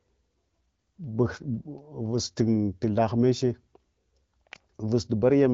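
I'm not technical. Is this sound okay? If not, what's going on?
Yes, no faults here.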